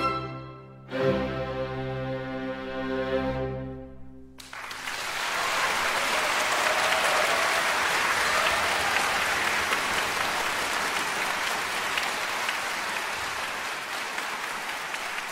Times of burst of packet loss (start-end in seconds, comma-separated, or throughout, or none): none